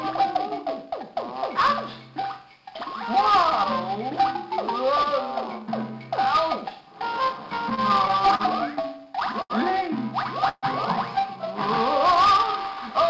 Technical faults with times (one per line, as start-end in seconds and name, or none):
7.70-8.41 repeated stalls (stutter)
8.81-9.52 repeated stalls (stutter)
10.49-10.65 call audio freeze